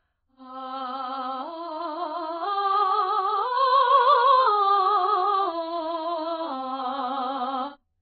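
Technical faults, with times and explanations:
Throughout, AAC compression: the music is dull and smeared, with nothing above 4.9 kHz and a warbling, fizzy texture on sustained tones, likely from heavy AAC-LC coding at a very low rate, around 11 kbps, which lowers the cut-off and starves the spectrum.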